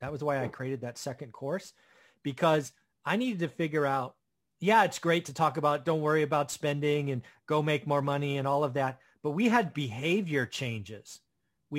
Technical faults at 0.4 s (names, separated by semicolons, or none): crude rate conversion